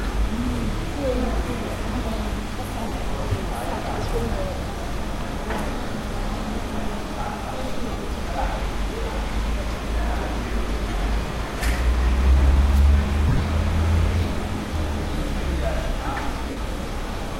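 At 2.88, 7.92, 10.89 and 16.50 s you get short dropouts of about 38, 53, 30 and 60 ms, and between 13.29 and 13.43 s a scatter of brief ones totalling about 83 ms, none longer than about 20 ms. That's lost LE Audio frames: the LC3 decoder fills each gap by replaying the last spectrum with scrambled phase, so these everyday sounds briefly turn into a noisy smear before picking back up.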